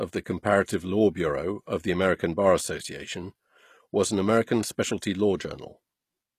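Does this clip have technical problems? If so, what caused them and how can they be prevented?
Yes, the whole clip has the gritty, lispy s sounds of HE-AAC compression, likely at a low bitrate around 24 kbps, with nothing above 15 kHz. The treble is rebuilt by copying lower bands upward, so it doesn't match the original. Encoding at a higher bitrate with plain AAC would prevent this.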